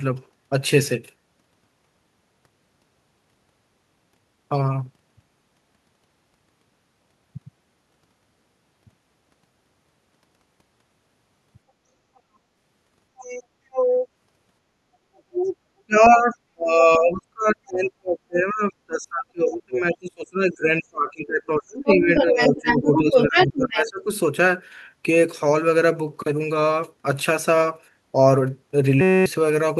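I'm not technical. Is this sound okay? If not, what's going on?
No. Three separate problems can be heard.

Other side's voice leaking through: a second voice sneaks in behind the talker at 13.17 to 13.43, 13.71 to 14.08, 15.16 to 15.54, around 19.5, around 21.9, and from 22.15 to 23.89 seconds. It starts quiet, and by the last stretch it is as loud as the talker. The likely cause is that the talker's device played the other person on a loudspeaker, the microphone picked it up, and the echo cancelling didn't fully remove it.

Speech suppressed in double talk: from 15.86 to 24.09 seconds, for about seven seconds in total, the talker's voice keeps sinking, sometimes almost to silence, and comes back in pieces. This overlaps the leaking voice above. The likely cause is that both people were talking at once, and the echo cancelling couldn't tell the talker apart from the loudspeaker sound, so it turned everything down together.

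System hang loop: from 29.01 to 29.26 seconds the sound turns into a short, steady buzz, about a quarter of a second long. It replaces roughly 0.3 seconds of the recording. The buzz comes from one tiny scrap of sound, about 5 milliseconds long, being repeated 46 times, around 188 times a second. The computer likely froze for a moment while the sound hardware kept replaying its last small chunk of audio.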